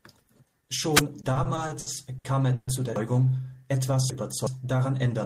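Speech, with three separate faults. From 0.92 to 1.03 s a wireless microphone noise hit happens as the analogue FM radio link fades and receiver noise swells into a brief swish of static. On a spectrogram it shows as a short broadband smear of noise covering the harmonic bands. In the waveform it appears as a ragged burst. Between 1.21 and 2.69 s, ending just before "zu der", repeated stalls (stutter) make the audio drag. Packets arrived late eight times, and each time the receiver stretched the last sound to fill the gap. The fills total 360 ms, with the longest at 130 ms, covering about a quarter of that span while losing nothing. A spectrogram shows harmonics frozen into flat horizontal stretches, and the waveform shows repeated cycles that fade during the longer waits. From 2.96 to 4.47 s, right after "zu der", chunks play out of order. A 0.37 s block arrived three chunks late and plays after the material that should follow it, so the speech sounds jumbled. 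The three hard joins appear as vertical broadband lines on a spectrogram and as abrupt steps in the waveform.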